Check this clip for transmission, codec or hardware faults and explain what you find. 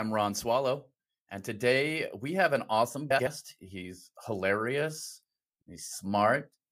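Two frames out of order faults occur in the speech. Just after "we have an awesome", 3.10 to 3.27 s, two adjacent blocks of about 78 ms swap places. At 5.62 s, two blocks of about 52 ms swap. Each plays with its halves exchanged, giving a garbled flutter. Unlike a dropout or repeat, nothing is lost or duplicated.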